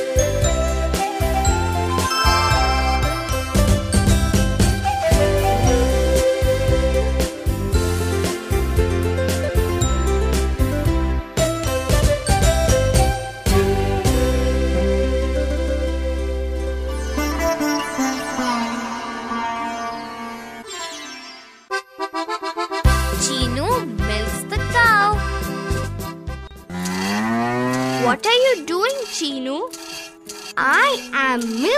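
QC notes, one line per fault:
No faults heard anywhere in this audio.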